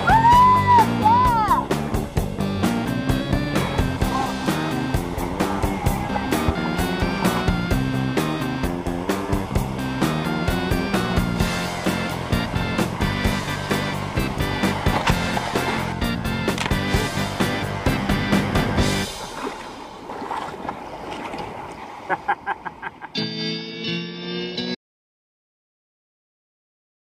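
At 24.75 s the sound cuts off abruptly, and silence runs to the end, about 2.4 s. This audio dropout to silence likely reflects lost input, whether a disconnected device, failed link or stray mute. The waveform flattens and the spectrogram goes blank, with no room tone.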